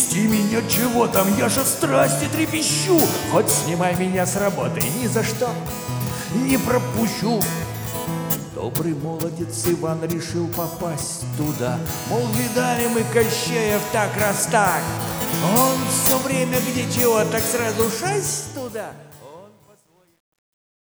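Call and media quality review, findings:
Truncation distortion on the fade-out, 18.18 to 20.89 s. Tail turns gritty, worst from 18.96 s. Fade or volume stage without dither, consistent with 10-bit output. Low levels collapse into square steps.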